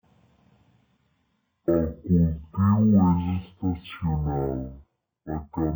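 It's a speech clip, and the whole thing plays at half speed and an octave low, 12 semitones down, with a faint mirrored copy of the sound up in the top half of the spectrum. That's stereo read as mono. The left and right samples were taken one after another as a single channel, so every frame counts twice and the timeline stretches to double length. Alternating between the two channels also folds in that high-frequency ghost.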